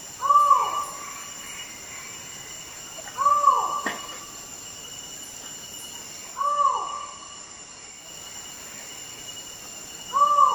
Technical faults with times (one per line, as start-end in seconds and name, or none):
6.27-8.17 digital radio blending to analogue